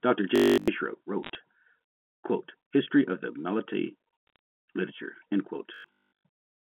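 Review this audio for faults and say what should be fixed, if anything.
Robotic sound from repeated short buffers occurs at 0.36 to 0.68 s and again at 5.74 to 6.68 s. A rigid 50 Hz buzz is imposed on the speech, which fits a 20 ms buffer being replayed while fresh audio is skipped. Nearly all of the first stretch and most of the second are repeats, and the likely cause is audio arriving too seldom at the playback stage. Prevent this with a larger jitter buffer or proper packet-loss concealment.

Bit errors on a digital phone line produce sharp ticks and crackle at 1.23 to 1.38 s and 4.27 to 4.36 s, over the 150 Hz to 3.5 kHz band of the G.711 mu-law link. The first burst is denser, with an error rate around half a percent against a few tenths of a percent in the second. Each flipped high bit, or flipped sign on a loud sample, throws one sample far off. Prevent this by fixing the noisy line or adding error protection on the link.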